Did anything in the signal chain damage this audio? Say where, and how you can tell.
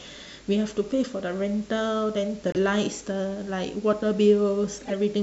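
Yes, at the codec stage: a corrupt frame was decoded at 2.49–2.56 s and again at 4.76–4.93 s, heard as short chirpy bursts around -15 and -20 dBFS. Flipped bits misplaced energy in frequency. Concealed packet loss would instead fade or repeat.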